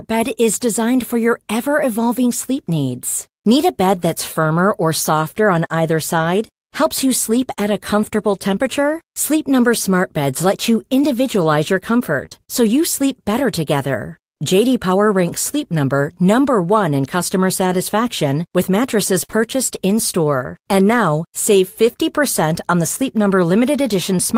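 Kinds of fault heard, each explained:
Short concealed packet loss, around 12.25 to 12.40 s and again at 19.31 to 19.35 s: roughly 20 ms chunks of the stream arrived too late or not at all, so the decoder improvised about 16 to 22 ms of substitute sound by extending what came just before, then crossfaded back into the real signal. At 12.3 s two such patches land almost on top of each other, giving a short smeared wobble, and the one at 19.3 s sits inside the longer dropout.
Burst of packet loss, 19.23 to 19.38 s: here about 60 ms went missing in one run, longer than concealment can cover convincingly. The receiver stretched the last sound for roughly 52 ms while letting it fade, producing a held, decaying tail instead of real content, and when the stream picks up again that stretch of audio is gone. Playback also comes out about 9 ms later than before the burst.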